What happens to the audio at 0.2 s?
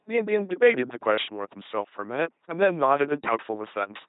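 At 0.2 s the speech is carried by an LPC-10 vocoder, as it is throughout. Each instant drives a ten-pole filter with buzz or noise, never both. The result is a heavily damaged robotic voice, consistent with 2.4 kbit/s, with nothing above 3.9 kHz.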